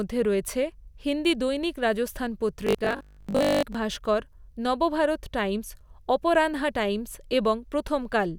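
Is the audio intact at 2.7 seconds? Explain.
No. At 2.7 seconds the speech is inside a stretch of robotic sound from repeated short buffers, running from about 2.67 to 3.77 s, between "রয়েছে হিন্দি দৈনিক রাজস্থান" and "ভাস্কর নবভারত টাইমস অপরানহা". The voice becomes a rigid, metallic buzz fixed at 50 Hz that only loosely tracks the speech. The likely cause is audio arriving too seldom, with a roughly 20 ms fragment replayed to fill the gaps for most of that span while the real audio is skipped.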